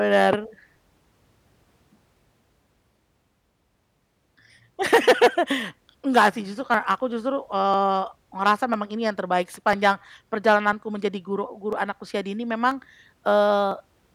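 From 0.76 s to 13.71 s, something stalls the USB bus or audio driver once every 1.0 s, producing periodic USB or driver dropouts. Each stall skips a few milliseconds of audio, about 4 ms, and the following samples are joined straight on with no gap. Around fifteen times in the speech this abrupt splice lands mid-waveform and is heard as an evenly spaced tick that sounds only while there is signal.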